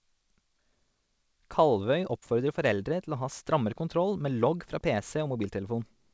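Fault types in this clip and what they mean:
None present; the speech has come over a wideband call link with nothing above 8 kHz, and no faults are audible.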